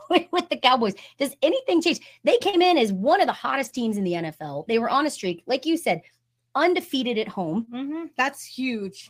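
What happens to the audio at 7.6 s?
From 7.57 to 7.63 s, a lost packet rebuilt from error correction: about 40 ms, consistent with two packets, is replayed from low-bitrate copies, sounding rougher and noisier, with a grainier, smeared patch on the spectrogram but no gap.

At 7.65 to 7.69 s, short concealed packet loss: roughly 20 ms missing is filled by extending the preceding sound, a brief smear or wobble, with a blurred spectrogram slice.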